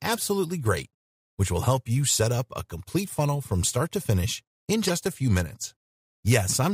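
A corrupt frame decoded at 4.87 to 4.90 s in this speech clip gives a brief chirp-like burst peaking around -15 dBFS. Flipped bits in the compressed data were played anyway, so misread gains and codes put energy at wrong frequencies. Its length points to a couple of damaged frames.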